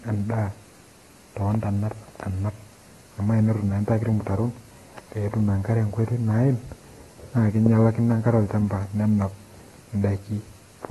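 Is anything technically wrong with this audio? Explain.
Yes, the speech has audible lossy-codec damage running through the whole clip, and it's most likely AAC compression at a low bitrate. The top end stops dead at about 12.1 kHz, so there's a muffled, dull edge. Sibilants and held sounds pick up a fizzy, warbling texture. That's what happens when an AAC-LC encoder starves its frequency lines of bits and smears detail, which fits a rate around 32 kbps.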